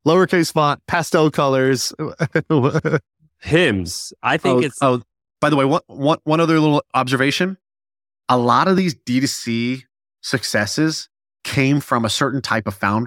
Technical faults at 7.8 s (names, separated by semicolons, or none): none